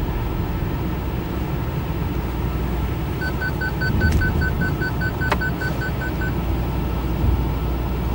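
From start to finish a video or display buzz sits under the sound, roughly 20 dB below it. A screen or video cable is leaking its scan signals into the audio path, giving a rasping 50 Hz buzz at the picture's field rate with gritty hash above it. Mains hum at 50 Hz is smoother and has no thin whine at 15.6 kHz. That whine at the video line rate is what sets this buzz apart.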